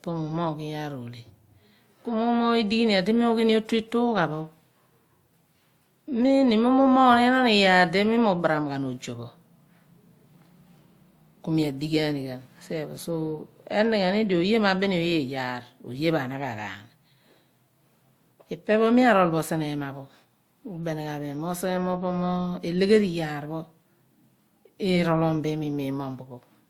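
It's a speech recording, and the whole thing carries that layered texture you get from transcoding between lossy codecs. Two different sets of artefacts sit on top of each other, which points to a WMA encode at around 96 kbit/s that was likely fed into Opus at about 48 kbit/s. Opus ends up spending bits re-encoding the WMA damage while adding its own. The top end still reaches 20.1 kHz, so the mismatched artefacts give it away rather than any dulling.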